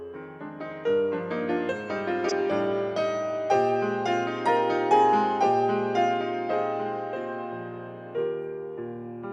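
A short glitch at 2.29 to 2.32 s, peaking around -15 dBFS, is a corrupt frame decoded: a couple of damaged compressed frames were played regardless.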